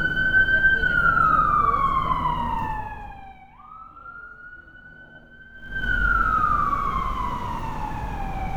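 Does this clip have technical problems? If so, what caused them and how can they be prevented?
Yes. From 5.52 to 5.86 s there's zipper noise: a level change of around 25 dB is applied in steps of about 1 dB, roughly fifty a second, with no smoothing, so each jump clicks and you hear a fast ticking over the sound. Ramp the gain per sample, or smooth it, instead of stepping it per buffer.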